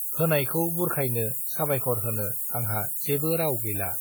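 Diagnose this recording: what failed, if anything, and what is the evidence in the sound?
Sample-format conversion is the first failure: the speech has been reduced to low bit depth with noise shaping, which fits a 4-bit word. The rounding error from so few levels is pushed upward in frequency, so a steady, thin hiss runs through the whole clip at roughly the level of the speech itself, rising strongly toward the top of the band. On a spectrogram this shows as a constant noise floor that brightens with frequency. On the waveform, the pauses are filled with noise instead of silence.

The codec stage adds plainly audible damage across the whole recording, likely from WMA compression at a bitrate that fits around 48 kbps. Because the codec works on transform blocks, its quantisation noise spreads over tens of milliseconds around each sound, giving a ringing, washy quality and a hiss that swells and fades with the speech. 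A spectrogram would show energy smeared in time around onsets, with the content stopping at about 20.1 kHz.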